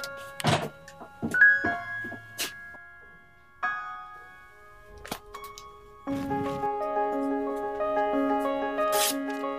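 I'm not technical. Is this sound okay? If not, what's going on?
No. From start to finish, the audio has been read two samples at a time, which is why it plays at double speed. The player grabs pairs of samples as if they were a single step, so everything runs twice as fast and sits a full octave, 12 semitones, higher.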